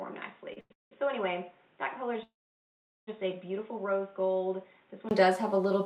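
From the very start up to 5.11 s the sound is dull and boxy, with nothing above 3.8 kHz, a level about 10 dB lower and a faint new noise floor. Then it opens up after a tiny 20 ms gap. That's likely an input switched to a poorer device, a narrowband mic or headset profile, swapped back at the end.

At 0.53 to 0.58 s and again at 0.60 to 0.72 s there's a short stall from a late packet. The jitter buffer ran dry, so the receiver held the last sound for 30 ms and then about 0.1 s, giving a slight smeared buzz before carrying on with nothing lost.

Right after, from 0.72 to 0.93 s, comes a call audio freeze. The last sound trails off and about 160 ms of it is silence. A longer one runs from 2.23 to 3.09 s, with roughly 0.76 s of silence. Both likely come from packets held up in transit, and the audio resumes exactly where it stopped.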